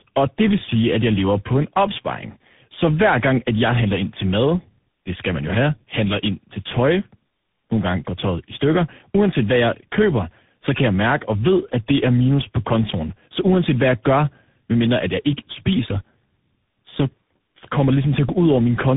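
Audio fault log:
Throughout: tandem speech coding. Each coder re-codes the last one's output, so roughness and warble exceed any single codec, fitting three in series. Nothing above 3.8 kHz.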